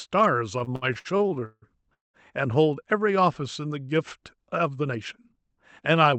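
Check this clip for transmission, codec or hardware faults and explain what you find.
Two transmission faults are audible, both from the jitter buffer, carried over a call codec path that limits the band to 8 kHz.

Repeated stalls (stutter), 0.59 to 2.17 s: packets arrived late, so the jitter buffer ran dry 13 times. The receiver stretched the last sound to fill each gap, the longest 200 ms, covering about 40% of the span. The speech drags and stutters, but nothing is lost.

Jitter buffer speed-up, 4.83 to 6.13 s: the buffer had built up excess delay, so the receiver trimmed short pitch-period slices, around 70 ms in total. The speech runs at 105% speed with unchanged pitch and sounds hurried.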